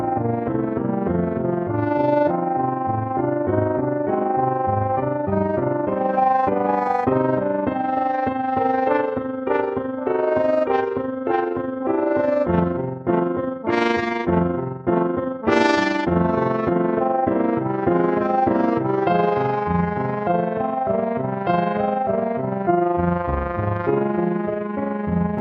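An overlap-add ripple runs through the whole audio. The level pulses up and down by about 6 dB at roughly 20 times a second, which gives a rough, fluttering tremolo. It comes from frames that were windowed and summed back together with an overlap whose gains do not add up to a constant. On a waveform the envelope shows a steady scalloped pattern. On a spectrogram it appears as regular vertical banding at that frame rate.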